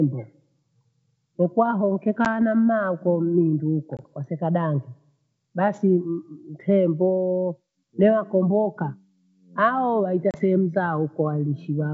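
Speech carried over a G.722 wideband call, which sounds clear up to about 7 kHz in what fits the full 64 kbit/s mode, suffers packet loss on an ADPCM call three times. Roughly one, two and three packets go missing: 10 ms at 2.25 to 2.27 s, just before "na mmaa akho ndingi"; 20 ms at 3.97 to 4.00 s, after "mmaa akho ndingi uko"; and 30 ms at 10.31 to 10.36 s, after "itemboo newakomboka ao". Each gap becomes a hard-edged silent hole. Because the receiver's adaptive predictor and step size drift from the sender's, the speech then resumes briefly with slight distortion before settling.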